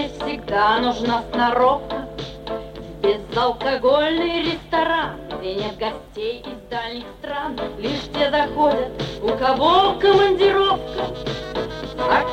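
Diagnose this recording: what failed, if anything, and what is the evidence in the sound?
No failure is audible; nothing in this recording points to a fault.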